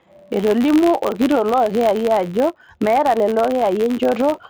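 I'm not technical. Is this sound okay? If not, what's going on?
No. Throughout the speech there is a steady buzz at roughly 94 ticks per second, caused by a filter restarted on every block. The audio is processed in short chunks, which fits a 512-sample block, and the filter forgets its state between chunks, so each one starts from silence with a tiny click. Those clicks repeat so fast they merge into a buzz that grows louder when the speech is louder.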